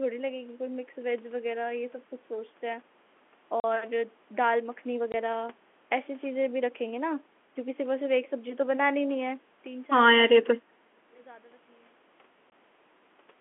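Packet loss filled with silence hits at 3.6 to 3.64 s, a 40 ms gap that fits two lost packets, with hard edges.

At 5.12 to 5.14 s, one 20 ms packet drops out the same way, leaving a short hole.

From 10.56 to 11.13 s, the sound dips by roughly 20 dB in pieces, about 0.4 s in total. This is likely speech suppressed in double talk, with the echo canceller ducking both sides.

At 12.5 to 12.52 s, another single 20 ms packet is lost, leaving a hole in the telephone-band sound.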